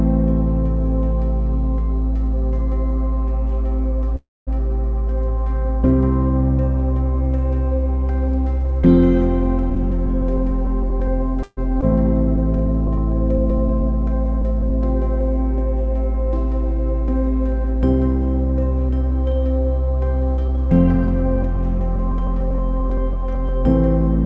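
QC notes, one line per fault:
4.16–4.50 s and 11.43–11.60 s, call audio freeze. The sound stalls and is held as a fading buzz or hiss, then goes quiet. That lasts about 210 ms of 309 ms in the first and 30 ms of 138 ms in the second. Nothing is lost; playback resumes where it stopped. Late packets emptying the jitter buffer are the likely cause.
9.70–11.08 s, 18.89–19.12 s and 20.37–23.49 s, jitter buffer speed-up. Pitch-period slices are cut repeatedly, so the audio hurries at unchanged pitch. The rates are 105%, 120% and 104%, trimming roughly 70 ms, 50 ms and 100 ms. The receiver is draining excess buffered delay.
11.81–11.85 s, skip ahead. Playback jumps forward past roughly a tenth of a second of audio. Only a 9 ms bridge joins the two sides. That stretch was dropped in transit or by an overflowing buffer while later audio was already waiting.
12.36–14.70 s, jitter buffer slow-down. 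Single pitch periods are repeated many times. The audio runs at 98% speed with pitch unchanged, so sounds drag slightly, adding 41 ms. The receiver is rebuilding its reserve.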